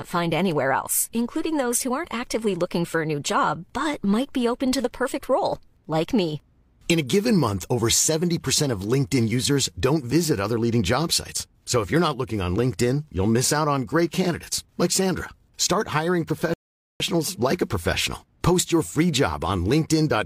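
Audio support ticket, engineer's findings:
Rebuffering stall at 16.54 s, lasting 0.47 s. Symptom: audio cuts to silence, then resumes at the exact point it stopped, with no content skipped and no repeat. About 465 ms added to playback. Probable component: streaming player buffer. Mechanism: playback drained the downloaded audio and halted until more data arrived. Waveform: flat silent gap from 16.54 to 17.00 s with abrupt edges. Spectrogram: full-band blank vertical strip, no smearing or residual energy.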